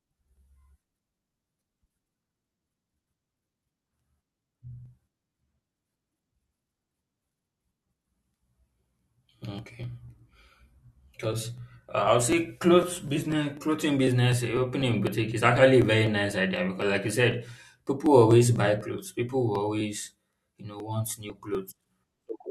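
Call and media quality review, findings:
Periodic USB or driver dropouts: bus or driver stall every 0.25 s, 0.12–22.29 s, around a hundred events. About a millisecond of audio skipped each time, not silence-filled. Regular ticks through the speech, audible only while signal present.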